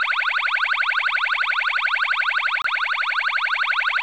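At 2.62 s a gap at a join of encoded pieces cuts a gap of about 25 ms into the running sound, ending at 2.64 s. Two separately encoded segments were butted together with the encoder's start-up delay and last-frame padding left in. Unlike a dropout, nothing is missing: the sound resumes exactly where it stopped, and the silence edges are smeared by the codec.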